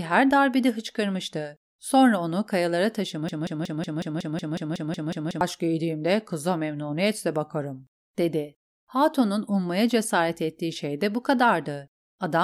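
A speech recording that catches at 3.29 s, just after "onu kayalara": a sliver of sound about 0.18 s long stutters back to back, identical each time, twelve times over, until 5.41 s, when it resumes at "giydiğimde kıza memnuniyetle bakarım". This is a broken-record loop, likely from a player, encoder or stream stalling and resending the last fragment it held. Whatever should have played during those two seconds is gone.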